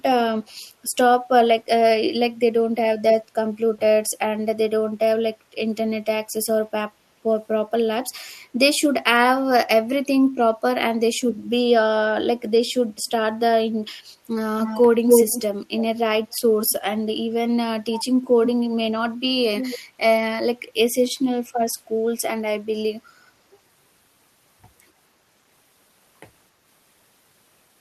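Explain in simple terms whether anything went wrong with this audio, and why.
Something went wrong: an echo leak, likely from the other side's loudspeaker being picked up by its microphone and not fully cancelled. A copy of the speech comes back about 0.28 s late: loud at 14.63 to 15.42 s, barely audible at 16.32 s, and quieter at 19.58 to 19.79 s.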